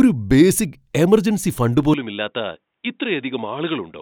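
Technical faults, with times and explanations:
1.94 s to the end: input switched to a poorer device, likely. Right after "ബേസിക് എമർജൻസി ഫണ്ട്" the speech abruptly turns dull and boxy, with nothing above 3.8 kHz. It drops about 5 dB in level, over a new, very faint noise floor. There is no gap at the change.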